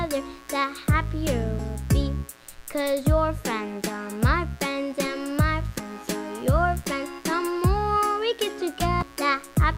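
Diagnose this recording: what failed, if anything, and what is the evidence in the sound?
Mains buzz runs through the whole recording, a steady raspy buzz roughly 25 dB below the programme. This is an analogue wiring fault. A dimmer, rectifier or poorly shielded cable is injecting sharp switching spikes twice per cycle of the 60 Hz supply. Because the spikes are so abrupt, their energy spreads into a dense ladder of 60 Hz harmonics extending well into the kilohertz range, which is why it rasps rather than hums.

Damaged data in a compressed stream shows up as three brief blips at 1.58 s, 5.78 s and 9.01 s, each lasting under 20 ms. This failure is at the codec or storage stage. Corrupted bytes in the encoded stream caused the decoder to misread or discard a frame, lose sync and hunt for the next valid frame header. The result is a short glitch where the damaged frame should have played.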